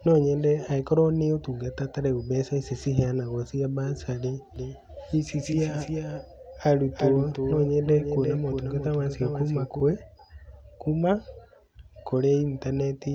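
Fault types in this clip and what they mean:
Doubled audio track: from 4.56 s to 9.8 s the speech gains a full-band second copy trailing about 0.4 s behind, a few dB quieter, with no reverberant tail, starting and stopping abruptly; this likely comes from the audio being captured twice through a slower path.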